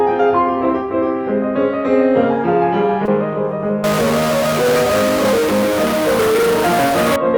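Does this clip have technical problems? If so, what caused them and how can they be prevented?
Yes. There are two faults in this music.

From 3.05 to 3.08 s there is short concealed packet loss. About 20 ms of audio never arrived at the decoder in time. The receiver covered the gap by extending the preceding sound and then crossfading back into the real signal, which leaves a brief smear or wobble at that point. Prevention: use a larger jitter buffer, forward error correction, or a more reliable network path so that packets arrive before their playout deadline.

From 3.84 to 7.16 s the music is corrupted. This is a stuck bit, likely from a broken data line or a faulty converter. One bit in every sample is held at a fixed value. Roughly half the samples are therefore wrong by that bit's weight, and the error follows the waveform, so it rides on the music as grainy noise or harsh distortion depending on which bit is stuck. 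Prevention: check converter hardware, cabling and data-path integrity with test signals before recording or transmitting.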